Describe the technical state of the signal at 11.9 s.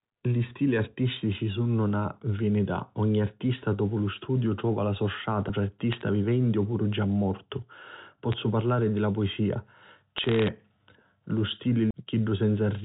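At 11.91 to 11.94 s a CD skip cuts in: the laser jumped to another turn of the disc's spiral, so the player mutes for roughly 30 ms and resumes from a different place. Unlike a plain dropout, the sound doesn't pick up where it left off.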